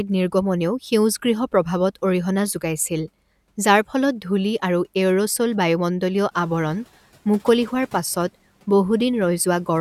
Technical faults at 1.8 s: none

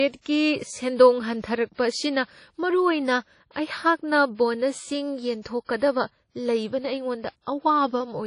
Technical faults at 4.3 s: WMA compression

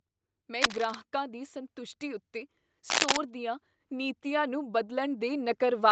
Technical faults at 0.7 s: cable scratch noise

